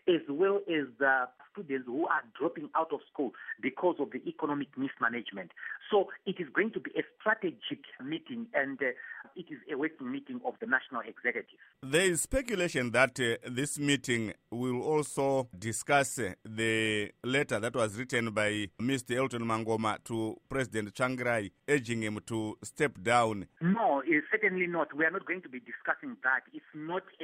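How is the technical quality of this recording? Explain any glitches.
No glitches can be heard anywhere in the recording.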